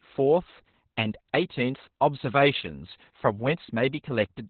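Throughout this speech clip the voice sounds muffled, hoarse and faintly robotic, with nothing above about 4.3 kHz. That points to heavy Opus voice compression in its narrowband SILK mode, which fits a bitrate around 8 kbps, where the coarse excitation coding roughens the sound.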